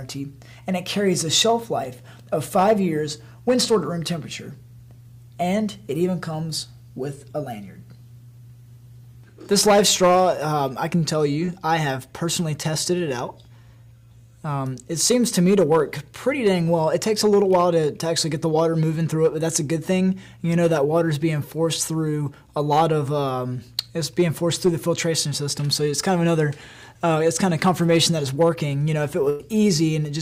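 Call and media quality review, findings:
Short concealed packet loss, 11.45–11.50 s: brief smear/wobble, about 20 ms of audio never arrived. The receiver's jitter buffer/decoder concealment extended the preceding sound for about 21 ms, then crossfaded back. Too short to fade or drop a stretch, unlike a burst.

Burst of packet loss, 29.30–29.41 s: a held buzz or hiss that decays over about 97 ms, then the audio resumes with about 100 ms skipped. Consecutive packets were lost or arrived late, and concealment attenuated as the gap continued. The audible fade-out distinguishes it from a short concealed smear.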